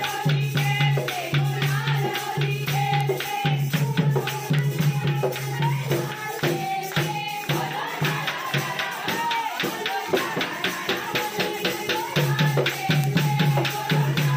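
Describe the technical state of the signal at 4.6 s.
At 4.59 s there is a bit error spike: a single sample is corrupted, as if one bit flipped in storage or on a digital link, so its value jumps by a power of two to about -9 dBFS and then snaps straight back. It is heard as one sharp, isolated tick with no relation to the surrounding audio. On the waveform it shows as a lone vertical needle; on a spectrogram, as a thin full-height vertical line across all frequencies.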